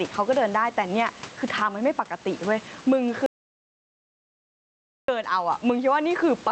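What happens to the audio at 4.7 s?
At 4.7 s you're in the middle of an audio dropout to silence running from 3.26 s to 5.08 s, about 1.8 s. Everything cuts to silence with no room tone, likely because the input dropped out while the recorder kept writing silence.

Gain pumping runs through the whole clip, though there's nothing to hear of it inside that gap. Around it, the gain swings by around 15 dB, pulling loud and soft parts closer in level and squashing the sound, likely from gain set too high with a fast limiter clamping down.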